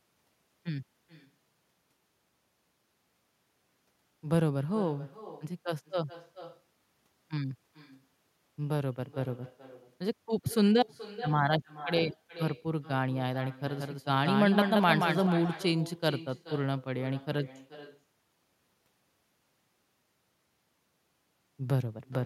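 All the way through, there's an echo with no canceller: the far end's speaker leaks back into their mic, so every phrase returns nearly half a second later, thin, about 16 dB down. From 13.67 to 15.27 s you also get a doubled audio track, a clean full-band copy about 5 dB quieter, trailing by roughly a fifth of a second and cutting in and out abruptly, likely a second, slower capture path mixed in.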